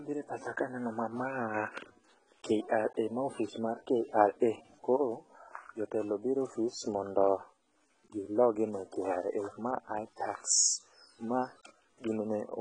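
All the way through, the speech has that heavy AAC compression sound, likely from AAC-LC squeezed down to a very low rate, something that fits roughly 16 kbps. Nothing comes through above about 9.7 kHz, so the top end is chopped off and everything sounds dull. The encoder is starving the spectrum to fit the budget. You can hear it as smearing and a watery, warbly fizz on sibilants and held sounds, with gaps where detail should be.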